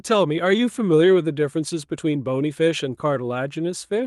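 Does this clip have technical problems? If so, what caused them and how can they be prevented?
No, the speech in this clip has no technical faults that a listener can hear, so there is nothing here that needs preventing.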